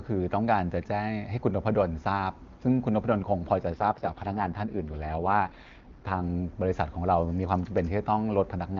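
An AMR rate drop runs from 3.72 to 6.23 s. The speech turns rough, raspy and synthetic while the band stays wide and nothing drops out. That fits the AMR-WB codec being pushed from 23.85 down to 6.6 kbit/s over a weak radio link.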